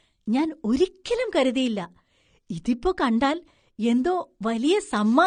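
Throughout, the speech sounds dull and smeared, with nothing above 9.7 kHz and a fizzy warble on sibilants: likely AAC compression, consistent with roughly 32 kbps.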